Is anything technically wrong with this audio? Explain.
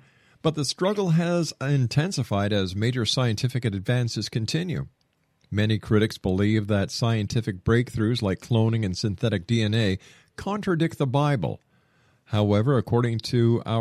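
No, nothing technically wrong can be heard in this speech recording. There is no fault to point to anywhere in it.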